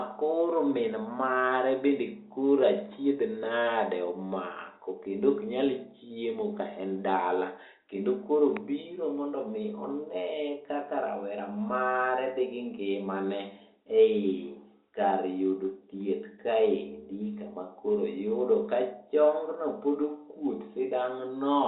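Nothing in this speech recording stood out as a technical fault on listening.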